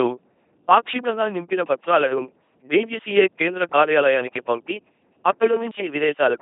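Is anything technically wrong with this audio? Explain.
Yes. Throughout, the speech carries heavy LPC-10 vocoder damage: each moment becomes buzz or hiss through a small filter, giving a robotic, buzzy sound with nothing above 3.7 kHz. This fits a 2.4 kbit/s vocoder, not ordinary low-bitrate codec smearing.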